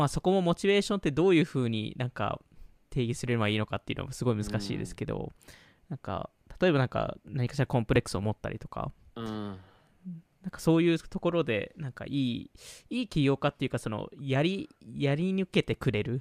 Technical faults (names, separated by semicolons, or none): processor overload crackle